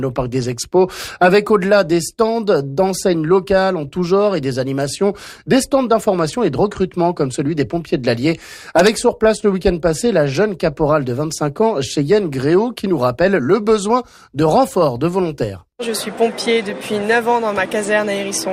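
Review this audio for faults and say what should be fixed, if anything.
No faults were heard; nothing needs fixing.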